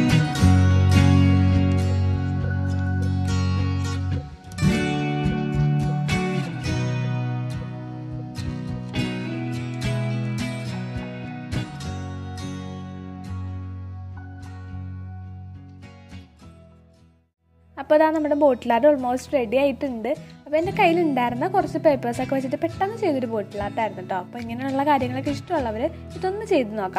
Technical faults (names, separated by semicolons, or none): none